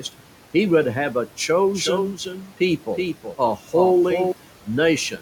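Speech with noise suppressor artifacts throughout: the background is pulled down by about 12 dB between phrases and rises under the speech, and the room noise sits about 20 dB below the voice. From 1.74 s to 4.32 s, just after "he would have a", a doubled audio track appears: a dry, full-band copy somewhat quieter than the original, trailing by roughly 400 ms and starting and stopping abruptly, likely from a second, slower capture path mixed in.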